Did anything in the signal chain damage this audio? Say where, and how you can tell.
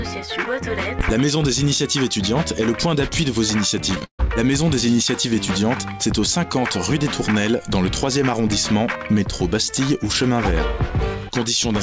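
Yes. From 3.95 to 4.20 s the audio turns choppy and robotic, with short holes, the longest about 140 ms, smoothed over by a smear of repeated sound. This is repeated packet loss on the network: lost or late packets were concealed by stretching the preceding audio, covering roughly two thirds of that stretch. The band stops at 8 kHz, which points to a wideband call codec.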